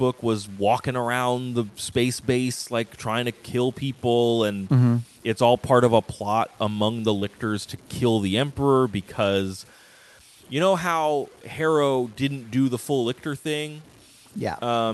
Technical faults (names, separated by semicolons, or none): low bit depth without dither; short concealed packet loss